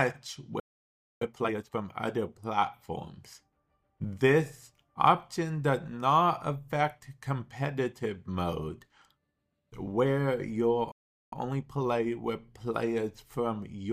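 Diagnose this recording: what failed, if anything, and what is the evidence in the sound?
Playback stall at 0.60 to 1.22 s and again at 10.92 to 11.32 s: the sound cuts to silence mid-flow for about 0.61 s, then 0.40 s. At the playback stage, the player's buffer likely ran dry or its output thread was blocked.

Time-compressed catch-up at 1.22 to 1.82 s and 11.32 to 12.12 s: right after each gap the audio runs hurried, at 2.0 and then 1.5 times normal speed, with unchanged pitch. The player is splicing out short cross-faded slices to work off its backlog.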